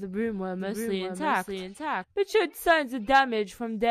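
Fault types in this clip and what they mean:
Doubled audio track: A second copy of the speech runs about 0.7 s behind, about 5 dB quieter, from 0.6 s to 2.0 s. It is full-band and dry, with no decay. It starts and stops abruptly, likely from a slower capture path or a misaligned edit.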